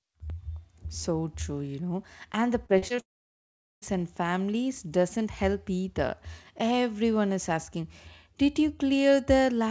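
Repeated packet loss, with its robotic sound, runs from 2.66 to 3.00 s. Four short gaps, the longest 35 ms, were each patched by stretching the preceding speech, so about a third of that span is concealed fill. The speech turns choppy and robotic, with pieces missing.

A long network dropout, the likely cause of what follows, runs from 3.00 to 3.84 s. The last sound is briefly carried on as a fading buzz or hiss, then roughly 0.77 s of silence follows before speech resumes, with that stretch lost. Throughout, the call codec leaves nothing above 8 kHz.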